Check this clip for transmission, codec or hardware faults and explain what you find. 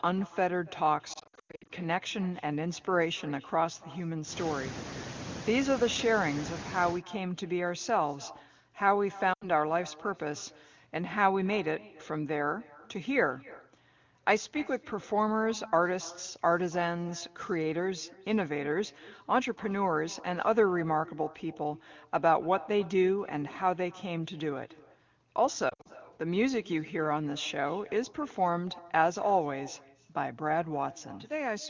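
Two faults are audible: an echo with no canceller across the whole recording, and three bursts of lost AMR speech frames.

The echo with no canceller runs from start to end. Each phrase is followed, about a third of a second later, by a copy at about 21 dB below the speech. The far end played the call on a loudspeaker. Its microphone caught that sound, and nothing removed it. So the speech returns after a trip through the network and back. The copy sounds quieter and thinner than the original.

Lost AMR speech frames occur at 1.13 to 1.71 s, 9.33 to 9.49 s and 25.70 to 25.88 s. Radio errors corrupted speech frames. The wideband decoder then filled each gap by reusing the last good pitch and vocal tract settings, with falling gain. In the first burst, 360 ms is lost, scattered over 560 ms, with the longest run 100 ms. The second loses 80 ms. The third loses 120 ms over 160 ms, with the longest run 60 ms. 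Single gaps sound like brief dips or warbles. Runs longer than two frames sink to near silence. The sound then returns weak or rough for a moment.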